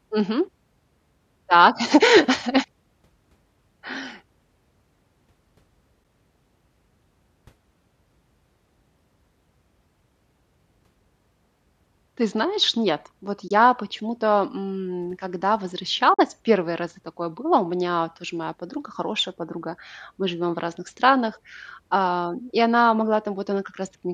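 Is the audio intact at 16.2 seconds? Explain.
No. Between "м когда" and "первые разы такое было", AAC frame loss with muting blanks 16.14 to 16.19 s. The decoder zeroed roughly 50 ms of spectrum, and the overlapping windows fade it softly. On a spectrogram or waveform it is a short, full-band gap with tapered edges.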